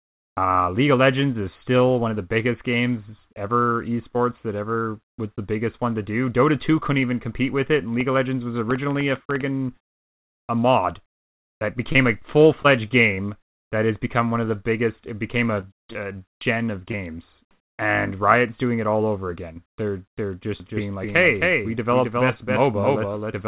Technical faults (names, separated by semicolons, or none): scattered short gaps; doubled audio track